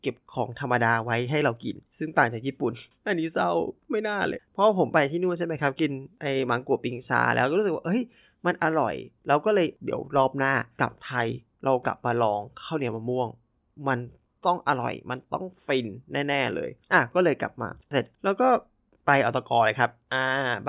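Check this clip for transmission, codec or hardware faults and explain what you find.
Nothing wrong can be heard anywhere in this speech.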